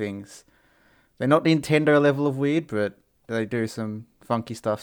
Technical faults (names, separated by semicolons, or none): none